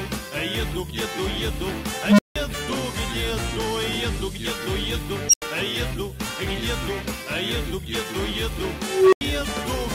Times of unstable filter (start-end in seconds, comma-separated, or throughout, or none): 2.05-2.36, 5.29-5.42, 8.83-9.21